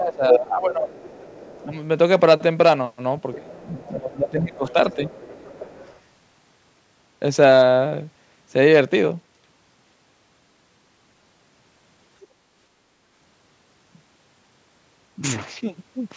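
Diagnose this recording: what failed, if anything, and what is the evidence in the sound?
The call's echo canceller, in the call-processing stage, likely misjudged double talk and turned down the near talker along with the echo. The speech dips by up to around 15 dB from 0.0 to 0.92 s and from 3.35 to 5.12 s, with a shallower dip at 1.65–1.74 s.

The same canceller likely also let some of the far end's loudspeaker playback through to the microphone. That other side's voice leaking through appears at 0.32–0.38 s at roughly speech level, then much fainter, well below the speech, at 0.92–1.65 s, 3.33–3.97 s, 4.67–6.0 s and 12.21–12.27 s.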